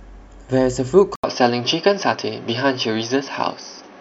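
At 1.16 s an 80 ms silence breaks the speech. From there to the end the sound is duller and boxier, with faint new background noise and a small level shift. The likely cause is the input switched to a poorer device. A spectrogram shows a gap, then nothing above 6.2 kHz.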